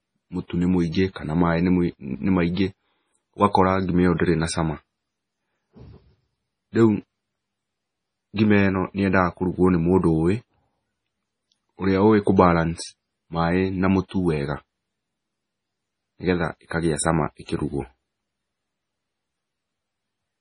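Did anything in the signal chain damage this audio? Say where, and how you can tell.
Yes, at the codec stage: likely heavy MP3 compression. Nothing reaches above 10.5 kHz throughout, and starved bands flicker into watery swirl, which points to roughly 24 kbps.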